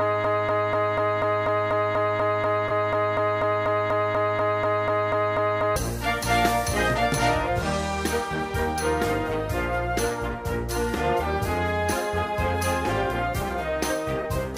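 From the very start the audio is already caught in a broken-record loop: a fragment of about 0.24 s repeats exactly, back to back, 23 times until 5.76 s, most likely because the player or stream stalled and kept resending the last piece it held. Whatever should have played in those seconds is lost. On a spectrogram this shows as an identical block tiled side by side, and the waveform repeats the same shape at a fixed 0.24 s period. Two corrupt-frame concealments also appear, at 2.68 to 2.71 s (one frame) and at 14.22 to 14.25 s (four frames). In each case damaged AAC data was caught by the decoder, which covered the gap itself rather than letting a squeak through. Each spans roughly 36 ms.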